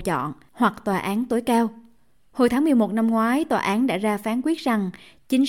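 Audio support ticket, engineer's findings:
No audible fault found in the speech signal; level, continuity and timing hold steady throughout, with no intervention indicated.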